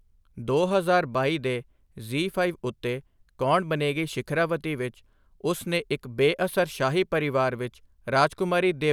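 A speech recording whose signal shows no audible technical fault at any point.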